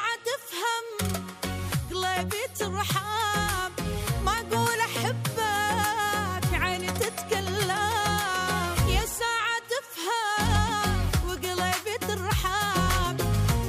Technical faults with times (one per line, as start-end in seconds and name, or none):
none